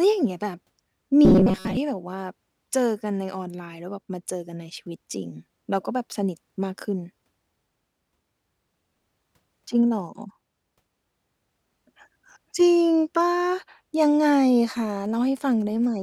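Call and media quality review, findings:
Robotic sound from repeated short buffers, 1.25–1.77 s: rigid metallic 188 Hz buzz over the speech. Likely cause: jitter buffer underrun repeating a 5.3 ms chunk instead of fresh audio. Spectrogram shows evenly spaced 188 Hz harmonic comb; waveform shows identical repeating cycles.

GSM signalling bursts, 14.90–15.86 s: galloping dit-dit-dit of short buzzes at roughly 30 dB below the speech. Nearby 2G phone signalling, with radio bursts rectified in the audio circuit. Spectrogram shows 217 Hz harmonic stripes in clumps; waveform shows spiky, gated pulse trains.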